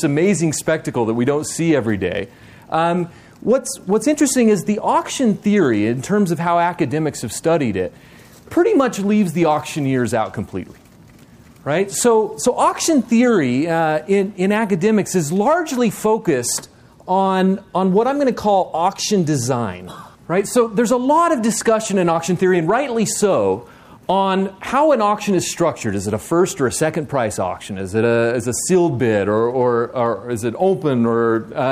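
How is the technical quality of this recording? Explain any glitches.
No glitches or technical faults are audible here.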